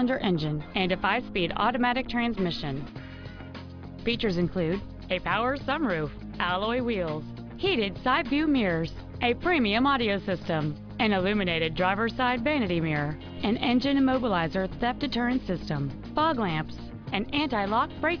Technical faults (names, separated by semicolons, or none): none